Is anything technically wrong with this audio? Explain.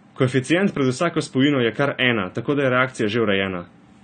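Yes. Throughout, the speech sounds dull and fizzy, with nothing above 9 kHz. This is likely AAC compression at roughly 32 kbps, coarsely quantising the spectrum and discarding the highs.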